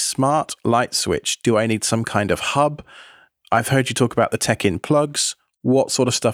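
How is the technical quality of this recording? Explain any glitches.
No glitches to report; the speech recording shows no audible technical faults.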